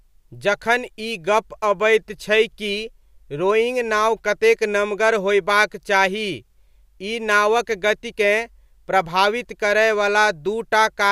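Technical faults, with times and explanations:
No technical faults stand out here, and the speech just runs along without any trouble that needs flagging.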